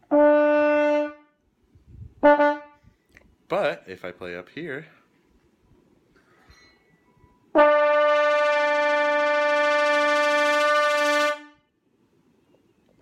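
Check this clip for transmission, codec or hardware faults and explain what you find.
I found no faults in this clip to explain.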